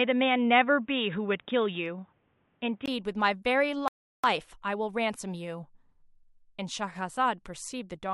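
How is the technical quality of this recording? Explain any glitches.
The recording has two clear glitches, one affecting tone and one affecting timing.

From 0.0 to 2.88 s the speech sounds dull and boxy, with nothing above 3.8 kHz, faint background noise sitting well below the speech, and a level a few decibels different from what follows. At 2.88 s a 20 ms silence marks the change to fuller sound. The likely cause is an input switched to a poorer device: a narrowband microphone or headset call profile was active before the system moved back to the better input.

From 3.88 to 4.24 s the speech drops to silence and then picks up exactly where it stopped, adding about 0.36 s without losing anything. This is a rebuffering stall. The player ran out of downloaded audio, paused until more data arrived, and then resumed, so the gap is dead air inserted into the flow rather than missing speech.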